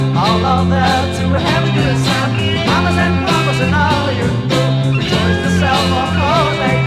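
Nothing stood out as a technical problem anywhere in the recording.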